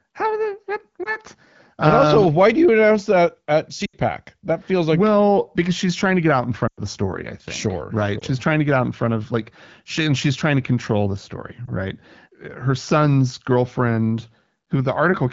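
Lost AMR speech frames occur at 1.03–1.16 s, 3.85–3.98 s after "you announce that at", 6.67–6.80 s between "to get out in" and "the story I think", 8.20–8.24 s, and 11.65–11.71 s after "to control the story". Frames failed their checks, so the wideband decoder repeated the previous pitch and vocal-tract settings at falling gain. The single 20 ms gaps give brief dips or warbles. The 80 and 100 ms runs fade to near silence and return weak or rough for a moment.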